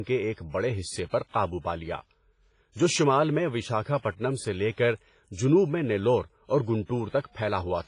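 Heavy lossy coding runs through the whole speech clip, most likely WMA compression at a low bitrate, around 24 kbps. Long transform blocks smear quantisation noise into a ringing, washy hiss that swells with the speech, and nothing survives above about 10.3 kHz.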